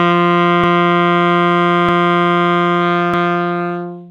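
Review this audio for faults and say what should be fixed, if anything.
Overlapping chunks cause a stutter three times, at 0.64 to 0.89 s, 1.89 to 2.14 s and 3.14 to 3.39 s. Each time, 250 ms of sound plays twice. The audio seems to have been handled in 1-second chunks, with each new chunk starting a quarter second before the previous one ended. The repeated span makes a jolt at every join, spaced 1.25 s apart. To prevent it, advance each chunk by exactly its own length so that the chunks meet without overlapping.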